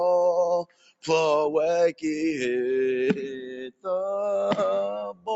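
A speech-tuned noise suppressor stays active across the whole clip and treats steady sound as noise. Its gain swings by around 10 dB, so held material and decays sink while onsets pass, giving a pumping, thinned-out character.

The suppressor cuts sound harder at three points. From 0.65 to 1.05 s, the level drops by about 21 dB. It drops by about 21 dB again from 3.71 to 3.86 s, and by about 14 dB from 5.13 to 5.28 s. In each case the sustained or fading portion sinks.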